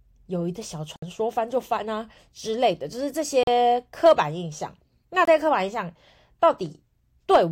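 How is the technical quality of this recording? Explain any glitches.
The speech has two brief dropouts. At 0.96 s and 3.43 s it cuts to silence for 63 ms and 40 ms, then picks up again. This is likely a Bluetooth stall: interference delayed packets, the headphone buffer emptied, and playback paused until retransmissions arrived.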